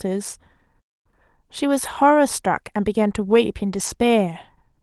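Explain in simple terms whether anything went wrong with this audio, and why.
At 0.79 seconds the speech suddenly cuts out and stays silent for about a quarter of a second, until 1.07 seconds, then carries on. This is a playback stall. The player most likely ran short of audio data, or was briefly held up by something else on the device, so it had nothing to send to the speakers until it caught up.

Twice more the voice turns briefly rough and grainy without going silent: from 1.85 to 1.95 seconds, and from 3.73 to 3.87 seconds. Each of these is a lost packet rebuilt from error correction. On this call, small chunks of audio went missing in transit. Each following chunk carried a cheaper backup copy of the one before, and the receiver played those backups instead. That filled about 60 and 80 milliseconds of sound with no gap, but at lower quality. The spots sound like a few separate chunks being replaced.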